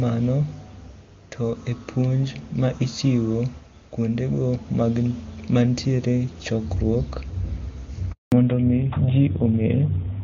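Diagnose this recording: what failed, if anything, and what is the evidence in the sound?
The network stage failed first. A handover gap opens at 8.12 s and runs for 200 ms, to 8.32 s. The speech cuts off within a few tens of milliseconds and the line goes completely silent. No frames reached the receiver while the call switched networks. Nothing fills the hole, so whatever was said in that window is lost. Then the new link comes up.

The codec stage changes at the same moment. From 8.32 s to the end there is a fallback to narrowband. Before the gap the speech has the clear top end of HD Voice, with little or no codec damage. That fits AMR-WB at its highest rate, about 23.85 kbit/s. After the gap nothing above 4 kHz remains. Sibilants lose their edge. The voice turns duller and rougher. This points to AMR-NB at 12.2 kbit/s on the new link.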